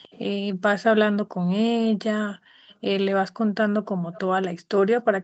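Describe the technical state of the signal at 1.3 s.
At 1.3 s the background is gated by the echo canceller. The dip runs from 1.24 to 1.39 s, about 150 ms in all. The canceller judged that the loudspeaker was playing and pulled the microphone level down hard to keep echo out. The room sound falls by about 40 dB at its deepest. It sounds like a brief hole in the ambience. The background then returns as the canceller releases.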